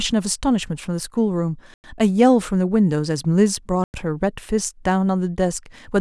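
At 1.74 s and again at 3.84 s, the speech stops for 100 ms. Each is a gap between chunks. The audio arrives in 2.0 s pieces, and silence sits between them. Nothing is lost, but each join leaves a short hole.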